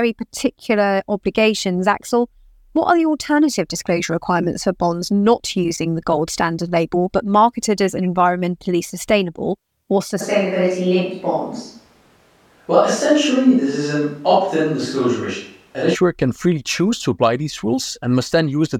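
Speech recording with a switch to a distant microphone from 10.22 s, after "as environmentally sustainable or", until 15.94 s, before "can freely choose to". The sound abruptly turns roomy and hollow with thinner bass at roughly unchanged level and faint room noise. The likely cause is a failed close microphone, with a farther one used instead.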